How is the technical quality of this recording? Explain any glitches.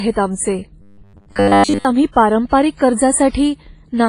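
The recording has heavy transform-codec damage throughout, and a stretch of robotic buzzing early on.

Across the whole clip there is heavy WMA compression damage, likely from WMA version 1 at a low bitrate, with the sound fitting something around 24 kbps. Long transform blocks smear quantisation noise over tens of milliseconds, and weak spectral components are zeroed, so the speech sounds washy and ringing, with a hiss that swells and fades along with the signal.

From 0.82 to 1.85 s the speech turns into a robotic sound from repeated short buffers. The likely cause is audio arriving too late, so the playback fills the gaps by looping the last 10 ms of audio while most of the real signal in that span is skipped. Repeating a 10 ms segment imposes a fixed 100 Hz buzz, which gives a rigid, metallic tone that only loosely follows the speech.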